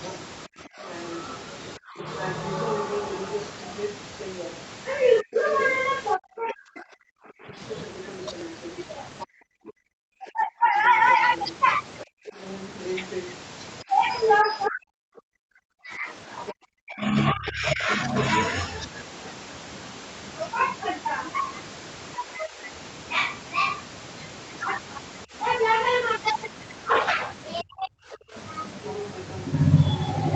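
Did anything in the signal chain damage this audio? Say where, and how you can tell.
Yes. From 0.03 to 16.52 s a second voice leaks through underneath the talker, roughly 10 dB quieter. This is the other side's voice leaking through, likely because the call processing's echo canceller left part of the loudspeaker signal in the microphone feed.

The talker's level also collapses in pieces during 0.47 to 2.03 s, 5.22 to 17.89 s and 22.17 to 28.35 s. The dips reach about 30 dB, and about 40 dB in the middle stretch, where around seven seconds are affected. This is speech suppressed in double talk, likely the echo canceller ducking everything while both sides spoke.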